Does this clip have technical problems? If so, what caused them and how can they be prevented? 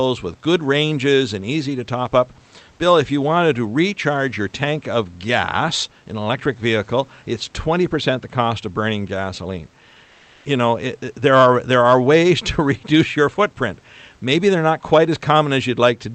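Yes. From 10.05 to 10.45 s the sender likely stopped transmitting during a pause (discontinuous transmission, consistent with Opus DTX). The receiver filled the gap with comfort noise in place of the background, so for about 400 ms the room noise becomes a steady, featureless hiss about 6 dB different in level. Turning DTX off on the sending side prevents this.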